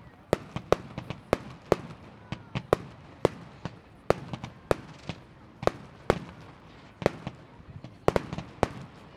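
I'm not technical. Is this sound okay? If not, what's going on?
Yes, this sound is okay, and nothing is going on with it that needs fixing.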